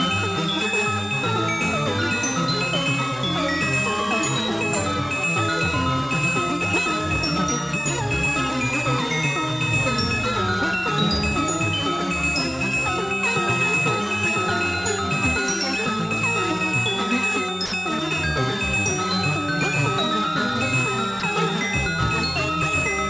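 Sound dropped by the voice detector at 17.66 to 17.72 s and again at 21.20 to 21.22 s: the sound briefly gives way to steady comfort noise, 60 ms and then 20 ms, likely because the sender's detector mistook that sound for background and stopped transmitting.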